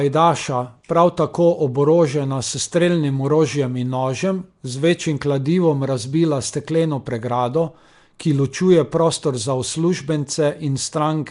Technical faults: Nellymoser compression

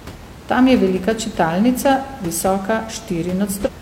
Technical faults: damaged data in a compressed stream

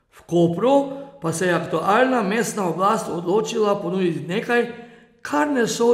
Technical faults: generation loss

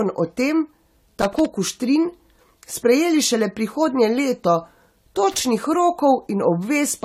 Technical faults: generation loss; loose connector crackle

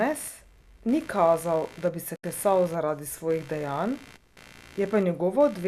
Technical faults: computer activity noise; digital broadcast dropout

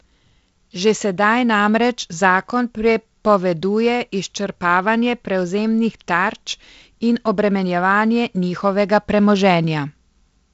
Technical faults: none

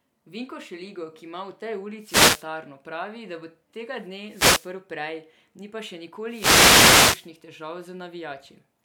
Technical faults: wireless microphone noise hit

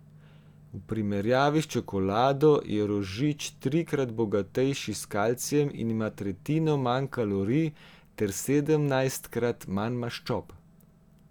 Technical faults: none

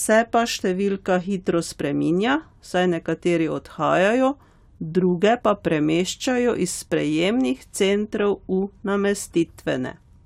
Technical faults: none

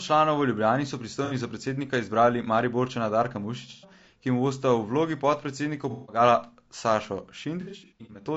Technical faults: low-delay AAC compression; AAC frame loss with concealment

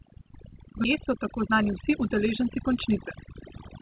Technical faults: overdone noise removal; skip ahead; jitter buffer speed-up

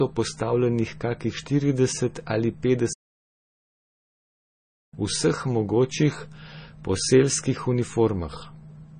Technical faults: MP3 compression; playback stall

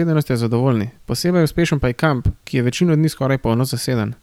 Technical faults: none

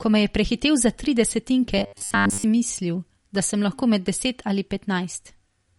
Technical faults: MP3 compression; robotic sound from repeated short buffers

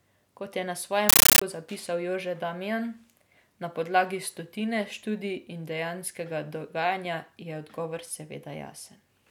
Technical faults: compressed stream played as audio

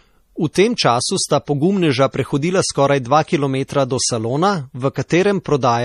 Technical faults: low-bitrate audio saved at a high bitrate

